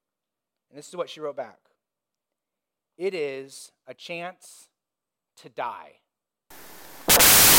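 Wrong sample width from 6.50 s to 7.59 s, after "to die": 16-bit data read as packed 24-bit, giving loud noise over buried speech running 1.5 times fast.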